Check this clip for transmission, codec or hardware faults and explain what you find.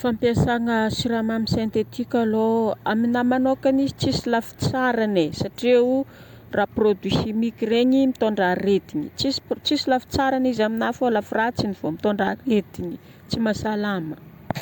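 Nothing faulty can be heard anywhere in this recording.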